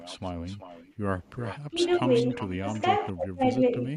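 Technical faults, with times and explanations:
0.00–0.94 s and 1.41–3.06 s, echo leak: a delayed copy of the speech trails 0.38 s behind, faint at about -25 dB, then stronger at about -15 dB. The likely cause is a loudspeaker echo that an echo canceller failed to remove. The fixed delay distinguishes it from room reverberation.
1.71–2.06 s, 2.60–2.67 s and 3.12–3.81 s, speech suppressed in double talk: the speech drops out in patches, by about 10 dB, then about 20 dB, and finally about 40 dB. These gaps are likely caused by an echo canceller turning down both its own talker and the loudspeaker echo during overlap, unlike the added copies heard in the echo leak.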